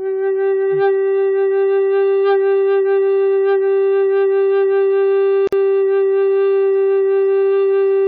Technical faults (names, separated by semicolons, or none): gap at a join of encoded pieces